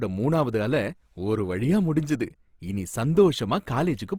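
Throughout, the speech sounds grainy and rough rather than swirly like MP3, pointing to likely Opus compression in music mode at a low rate near 24 kbps.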